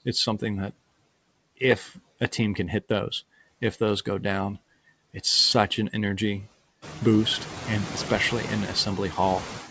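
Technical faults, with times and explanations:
Throughout, noise suppressor artifacts: the suppressor cuts bands it classes as steady noise by about 16 dB, frame by frame, so the background drops away in pauses and returns under speech, a pumping heard against room noise that rises around 7 s.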